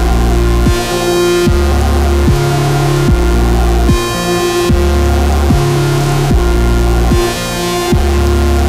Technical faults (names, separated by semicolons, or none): none